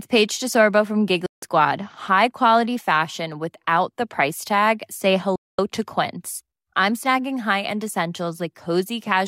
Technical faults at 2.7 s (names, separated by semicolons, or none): none